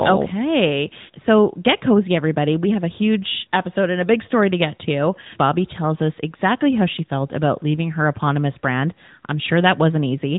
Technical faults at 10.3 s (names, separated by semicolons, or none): AMR narrowband mobile codec